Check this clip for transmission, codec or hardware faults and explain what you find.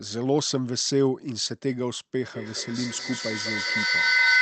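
One fault is audible: a feedback echo between two devices, running from 2.33 s to the end. From that point each stretch of speech returns at a steady interval of about a fifth of a second. Two devices in the same room share the call. One plays the other's microphone signal, and that microphone hears it again. Neither echo canceller removes the other device's output. Here the loop is loud. The repeats reach about 6 dB above the speech and build up instead of fading. The sound also carries the usual Opus coding texture and a top end that stops at 8 kHz.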